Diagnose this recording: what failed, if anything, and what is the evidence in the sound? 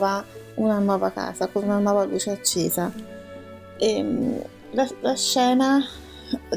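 Nothing in the signal chain has failed: the level, continuity and timing of the signal hold steady throughout, with no audible break, distortion or disturbance at any stage.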